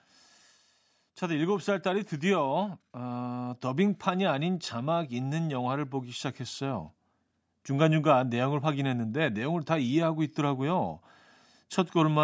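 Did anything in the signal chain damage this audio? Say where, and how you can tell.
Yes: automatic gain rising in the call processing stage, from 1.2 to 3.69 s. The gain control judged the input too quiet and lifted it by about 4 dB over those two and a half seconds, so the speech and the background noise swell together.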